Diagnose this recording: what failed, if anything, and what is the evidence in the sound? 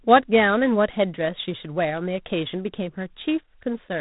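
The codec stage failed. The whole clip shows G.726 ADPCM damage. Nothing above 4 kHz survives, so the speech sounds boxed in. A harsh, rasping hiss rides on the speech throughout, rising and falling with its level. The coarseness points to the 24 kbit/s mode. There, each sample carries only 3 bits describing its difference from an adaptive prediction. Those few steps cannot follow the waveform closely. The error becomes that level-tracking hiss.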